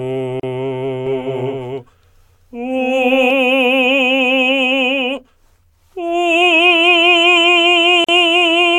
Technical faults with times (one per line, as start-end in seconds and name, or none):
0.40-0.43 gap at a join of encoded pieces
1.06-3.30 doubled audio track
8.04-8.09 gap at a join of encoded pieces